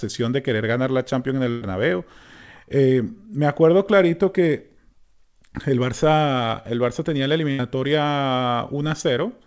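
Packets were lost or arrived too late in two bursts of packet loss, so the receiver had to conceal the gaps. From 1.50 to 1.63 s it stretched the last sound over about 114 ms while fading it down, and 120 ms of audio never arrived. At 7.51 to 7.61 s, just after "tenía la", a 74 ms fill covers 80 ms of lost audio. Each gap is heard as a held, dimming buzz or hiss before the audio jumps ahead. Nothing comes through above 8 kHz, which fits a wideband call codec.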